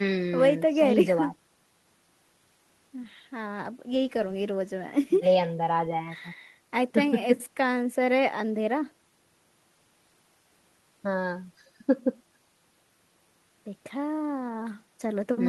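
No technical faults can be heard anywhere in this recording.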